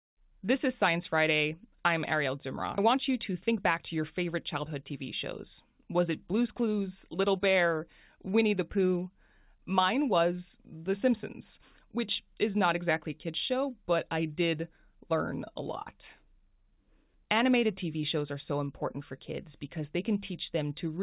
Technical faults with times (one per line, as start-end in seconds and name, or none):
2.78-2.80 skip ahead
2.94-4.92 jitter buffer speed-up
5.33-7.63 jitter buffer speed-up